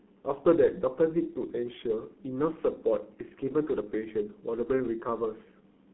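From start to finish the speech carries heavy G.723.1 codec damage, the low-rate telephony coding whose coarse detail fits roughly 6.3 kbit/s. The line band runs only from 200 Hz to 3.5 kHz, so the sound is muffled and thin, with hoarse, rough vowels and smeared consonants as the slowly updated voice model lags each 30 ms frame. A spectrogram shows a hard ceiling at 3.5 kHz, empty lows below 200 Hz, and blocky, blurred harmonics.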